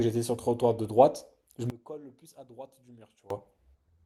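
From 1.7 to 3.3 s the speech collapses by about 23 dB into a faint residue, then returns at full body. The likely cause is one channel inverted: with one side's polarity reversed, the centred voice cancels when the channels are summed to mono, leaving only their small differences. Unlike a dropout, the remaining trace is a faint copy of the speech rather than silence.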